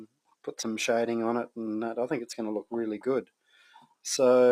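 A speech-tuned noise suppressor stays active across the whole recording, treating steady and sustained sound as noise, so levels pump and swing by roughly 5 dB while attacks pass through. The sound cut by the noise suppressor is worst from 0.00 to 0.47 s and from 3.23 to 4.05 s, where held material and decays sink by up to about 21 dB and 20 dB.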